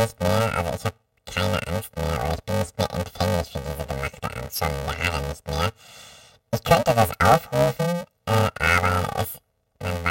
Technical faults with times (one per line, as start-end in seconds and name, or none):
0.00-10.10 planar audio read as interleaved